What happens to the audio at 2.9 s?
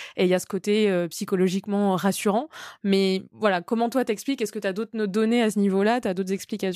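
Nothing goes wrong at 2.9 s; the speech carries on intact through that moment.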